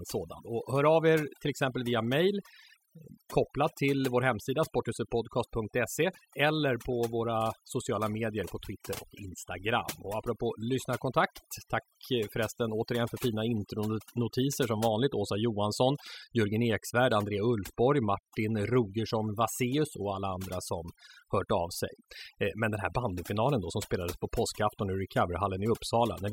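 A speech recording with overdone noise removal throughout. A noise reduction stage was set too aggressively. It pulls individual frequency bands down whenever they sit near its noise estimate. The background drops and breaks up into twinkling specks.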